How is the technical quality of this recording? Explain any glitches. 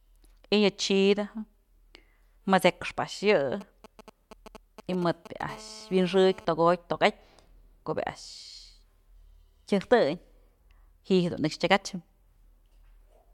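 Quality is compromised by interference from a nearby 2G phone, with two stretches of GSM pickup that overlap the speech.

GSM signalling bursts, 3.61 to 5.42 s: the phone sends short groups of radio bursts and the audio circuit rectifies them, producing galloping ticks and brief 217 Hz buzzes roughly 20 dB below the speech.

GSM phone buzz, 5.49 to 6.45 s: continuous transmission at 217 bursts per second, as in an active call, is rectified into a hard, raspy 217 Hz buzz with many harmonics, about 24 dB below the speech.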